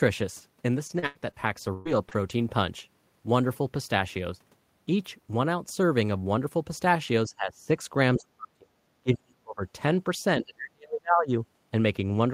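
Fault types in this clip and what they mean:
Repeated packet loss (robotic sound): Between 0.87 and 2.31 s the sound breaks up six times, with about 300 ms missing in total and the longest gap 121 ms. Each hole is bridged by stretching the preceding sound, so about a fifth of that span is synthetic fill with a robotic tone. The rapid recurrence and the artificial fill set it apart from a single clean dropout or from simple level dips.
Speech suppressed in double talk: Four passages are turned down: 7.26 to 7.71 s by about 15 dB, 8.16 to 8.75 s and 9.03 to 9.62 s by about 40 dB, and 10.38 to 11.31 s by about 35 dB. The likely cause is an echo canceller turning down this side's voice while the far side's sound was playing on the loudspeaker. Unlike packet loss, the speech fades and returns with no robotic fill.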